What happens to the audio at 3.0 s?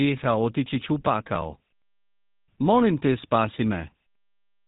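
At 3.0 s, as throughout the clip, GSM full-rate codec damage is plainly audible. The codec models the vocal tract and drives it with sparse, regularly spaced pulses, which fits a 13 kbps stream. Everything above 3.8 kHz is gone, and the speech takes on a buzzy, gravelly roughness.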